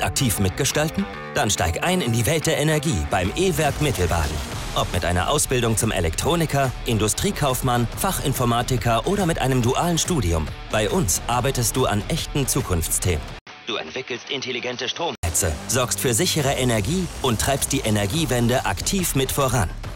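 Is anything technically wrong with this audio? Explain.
Yes. From 13.39 to 15.23 s the input likely switched to a poorer device, whose narrower band cuts everything above 6.2 kHz. After an 80 ms gap, the sound turns dull and a few decibels quieter, with a faint new background hiss.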